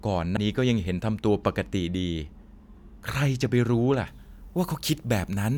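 A speech recording with two faults. Early on, MP3 frames were most likely dropped, breaking the bit reservoir: the next frame reached back for data that was gone and decoded another frame's bytes instead, so from 0.35 to 0.38 s the audio skips ahead, a disruption about one 26.1 ms frame long. From 4.07 s to the end, pre-emphasis was left on: treble boosted on an FM 50 µs curve never received its matching cut, leaving 10 kHz about 10 dB hot relative to 1 kHz, so that closing stretch sounds thin, bright and sharply sibilant.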